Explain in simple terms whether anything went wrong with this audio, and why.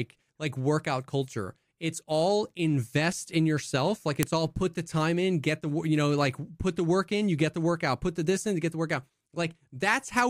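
Something did go wrong: at 4.23 s, just before "all put the time", there is a sharp click. That is a file header played as audio: a new piece of the recording began there, and its header bytes were played as sound.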